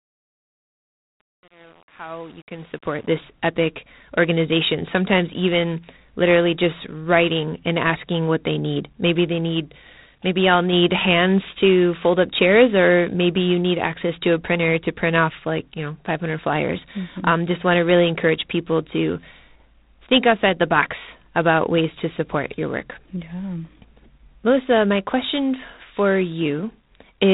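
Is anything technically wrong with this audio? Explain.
Yes. Two faults are audible in this speech.

The whole clip has G.726 ADPCM damage. The codec sends only the difference from an adaptive prediction, with very few bits per sample. At 24 kbit/s that is three bits, so quantisation noise is high. It rides on the speech as a harsh, rasping hiss that rises and falls with the level. Nothing above 3.8 kHz survives, so the sound is narrow and dull.

The opening has truncation distortion on a fade. From 0.0 to about 3.09 s, the level fades in. But the fade stage keeps too few bits and adds no dither. The grit fits a stage of about 8 bits. Near the bottom of the fade, the waveform collapses into coarse square steps. So the quiet start sounds gritty. It is worst until about 3.03 s and clears just before "this epic organization".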